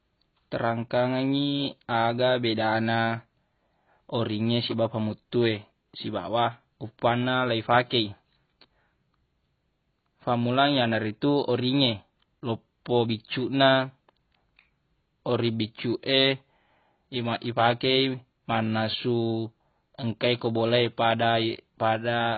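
Throughout the speech, nothing sounds above 4.6 kHz, and sibilants and held vowels warble with a fizzy smear. This is likely heavy AAC compression, fitting a 16 kbps stream. A plain low-pass filter would leave the band below the cut-off clean, but here it is holed or noisy too.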